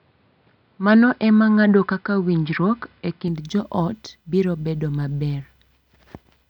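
From 0 to 3.28 s the speech is dull and boxy, with nothing above 5.2 kHz, then opens up with no gap just before "joot biro bedo maber". A switch to a poorer input device is the likely cause: its own faint noise floor, about 40 dB down, and tone change, unlike a plain band limit.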